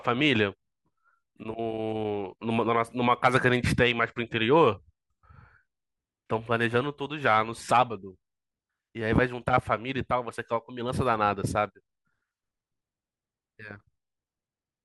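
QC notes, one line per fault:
No technical faults were found in the speech signal during review.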